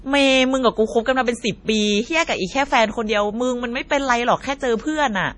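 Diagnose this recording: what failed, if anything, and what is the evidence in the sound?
MP3 compression artefacts run through the whole speech clip, at the codec stage. Nothing is left above 10.6 kHz, and heavy watery swirl and smeared consonants point to a starved bitrate near 32 kbps. The encoder likely cut the treble and dropped weak spectral lines frame by frame.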